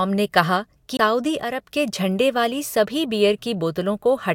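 At 0.97 s the speech breaks with a CD skip, lasting until 0.99 s. The laser has jumped off its track and lands on a different turn of the disc's spiral. The player mutes briefly, for roughly 20 ms, then resumes from the new position. The result is a short tick or gap. The speech then jumps abruptly, picking up at a point that does not follow on from where it stopped.

From 1.43 s to 1.61 s the level drops abruptly by about 6 dB, then returns, just before "के झंडे वाली". The tone does not change, only the loudness. This is likely one channel dropping out. If one side of an identical left-right pair goes silent, the mono sum loses half its signal. That gives exactly this clean 6 dB dip, with nothing else altered.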